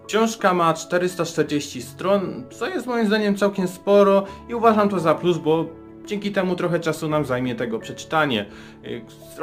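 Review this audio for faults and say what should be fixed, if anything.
Sample clock jitter runs through the whole clip: the converter's clock wanders by around 3 microseconds, so each sample lands slightly off time. Steep, fast-moving parts of the waveform suffer most, producing a hiss-like roughness about 35 dB below the signal that swells with loud, bright passages and disappears in quiet gaps. On a spectrogram it shows as a broadband noise haze that tracks high-frequency energy; the waveform itself looks nearly normal. To prevent it, clock the converter from a low-jitter crystal or a clean, well-regenerated word clock.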